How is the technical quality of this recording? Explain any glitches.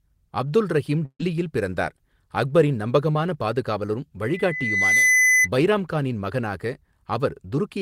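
The recording has three clear technical faults: a burst of lost audio early on, a brief concealed dropout in the middle, and a feedback squeal in the second half.

From 1.05 to 1.20 s there is a burst of packet loss. About 140 ms of the speech never arrived, so the receiver kept extending the last sound and turned it down, ending in a short stretch of near-silence. The result is a held, fading buzz or hiss, and the speech resumes further on with that stretch missing. Its length and the audible fade to nothing set it apart from the shorter dropout that follows.

At 3.12 to 3.15 s a short concealed packet loss replaces about 20 ms of speech with a continuation of the preceding sound, blended back into the real signal. It comes across as a quick smear or wobble, and a brief consonant may simply vanish. Unlike the earlier burst, it is too short to fade or go silent, so there is no audible gap.

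From 4.22 to 5.49 s there is a loudspeaker feedback squeal. The microphone picks up its own loudspeaker, and at 2 kHz the loop gain exceeds one, so that tone swells over most of a second until it sits a few decibels above the speech. Its single fixed pitch, rising steadily on its own, distinguishes it from the dropouts, which smear the existing sound instead of adding a new tone.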